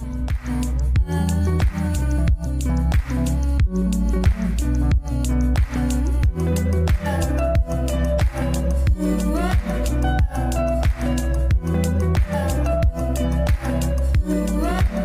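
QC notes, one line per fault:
No technical faults can be heard in the audio; the signal stays continuous and stable throughout.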